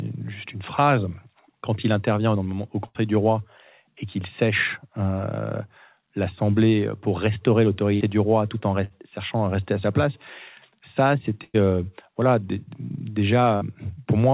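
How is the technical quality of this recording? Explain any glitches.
The recording has five short bursts of packet loss, heard through a call path with nothing above 4 kHz, which fits G.711 mu-law at 64 kbps.

The bursts occur at 2.86 to 2.97 s (between "quand il intervient au" and "du roi et qu'il"), 7.95 to 8.02 s, 8.84 to 8.92 s (between "du roi tout en" and "cherchant à rester à"), 11.44 to 11.56 s (just before "euh voilà"), and 13.56 to 13.63 s. In each, the receiver extends the last sound as a fading buzz or hiss, then resumes having skipped 60 to 100 ms of speech. Unlike a plain dropout to silence, the gap is filled rather than dead.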